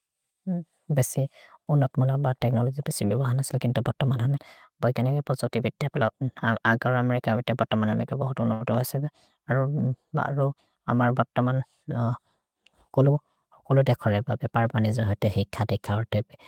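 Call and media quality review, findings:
Short stall from a late packet, 8.53–8.64 s, right after "बत मनमे ते बहुत्". Sound held too long, slight buzz or dip. Jitter buffer ran empty waiting for a late packet. Receiver stretched the last sound for 72 ms. Nothing lost. Delay grew by 72 ms.

Jitter buffer speed-up, 12.90–13.18 s. Speech hurried, pitch unchanged, running at 114% speed. Receiver trimming excess buffered audio. Short pitch-period pieces cut repeatedly, about 50 ms removed in total. Likely after delayed packets arrived together.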